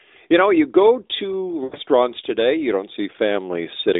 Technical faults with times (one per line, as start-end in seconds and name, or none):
1.64-1.76 lost AMR speech frames